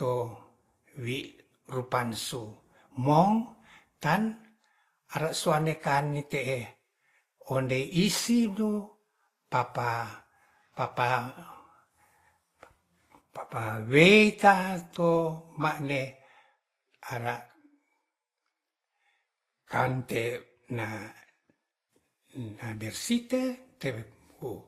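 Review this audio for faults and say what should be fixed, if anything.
Throughout, transcoding between lossy codecs, likely a low-bitrate encode re-encoded to Opus, layers both codecs' artefacts on the speech and leaves nothing above 15.7 kHz. Encode once from the original lossless source instead of re-encoding an already compressed file.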